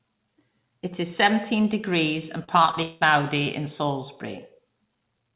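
Just after "is seventeen degrees and", from 2.44 to 3.03 s, the call suffers repeated packet loss (robotic sound). Audio keeps failing to arrive, leaving five holes, the longest about 182 ms. The receiver covers roughly 270 ms by stretching out the last good sound and leaves about 280 ms simply missing, so nearly half the stretch is patched. The speech turns choppy, with pieces gone, all within a band that stops at 4 kHz, as telephone-grade G.711 coding does.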